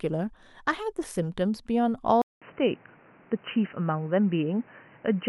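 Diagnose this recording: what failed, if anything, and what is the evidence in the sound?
Driver stage: a 200 ms gap at 2.22 s, then boxy sound with the spectrogram empty above 3 kHz and a new noise floor, likely an input switched to a poorer device.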